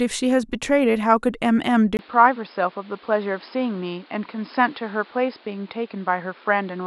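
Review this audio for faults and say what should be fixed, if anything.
At 1.97 s the speech turns abruptly dull and boxy and stays that way to the end, with nothing left above 5.2 kHz. A brief gap of about 20 ms marks the change, a different background hiss appears roughly 30 dB below the voice, and loudness barely shifts. This is the signature of an input switched to a poorer device, likely a fallback microphone or a headset's narrowband call profile, whose smaller bandwidth and own noise replace the original path. To prevent it, lock the recording input to a fixed device and disable automatic device or profile switching during capture.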